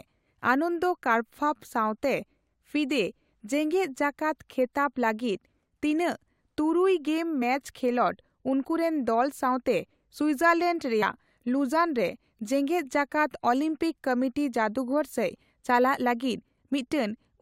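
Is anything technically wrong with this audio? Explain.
Yes, there are two spots where compressed frames are skipped in this speech. At 7.41 s the audio jumps ahead by about 20 ms, and at 11.02 s by about 40 ms. That points to one and then two whole frames of roughly 21.3 ms going missing or being rejected by the decoder as damaged.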